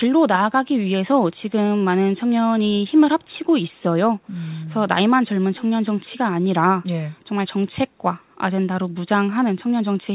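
Echo leak at 3.21 to 3.27 s and again at 3.76 to 3.82 s: two brief, very faint scraps of delayed speech, roughly 40 dB below the talker and trailing by 404 ms, likely from a far-end loudspeaker whose echo canceller let residual pickup return over the narrowband call, which carries nothing above 4 kHz.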